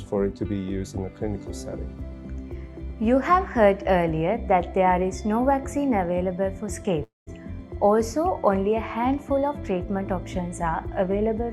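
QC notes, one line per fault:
7.03–7.30 s, long network dropout: the preceding sound smears into a decaying buzz, then about 180 ms of silence, and about 240 ms of audio is skipped on resumption, likely because packets stopped arriving and the receiver filled the gap before muting.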